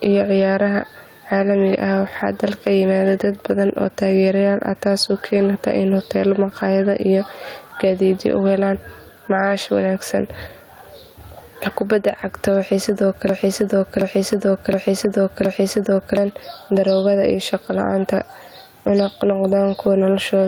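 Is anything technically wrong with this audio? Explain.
Yes, three problems can be heard.

Gain pumping runs through the whole clip. The room noise, normally about 43 dB below the speech, rises and falls with the gain, a swing of around 10 dB. The likely cause is gain set far too high, with a fast limiter pulling it down on every peak. Unlike a noise gate, the background never cuts out. It breathes up and down.

Lost packets rebuilt from error correction appear at 5.37–5.43 s and 8.25–8.31 s. Each is a brief rough, noisy patch of about 40 ms, which fits a pair of lost packets whose low-bitrate copies, carried in the following packets, were decoded in their place. Unlike ordinary packet-loss concealment, there is no dropout and no stretched, smeared tone, only a moment of coarser sound.

A broken-record loop runs from 13.29 to 16.17 s. A 0.72 s fragment repeats exactly, back to back, four times, and the speech that should have filled that time is gone. 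This is likely a stall in the player, encoder or stream that kept resending its last fragment. Unlike an echo, each repeat is identical and does not fade.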